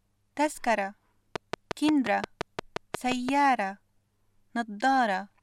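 A train of clicks runs from 1.36 to 3.30 s: about ten evenly spaced pulses at 5.7 per second, popping well above the sound, likely from electrical interference.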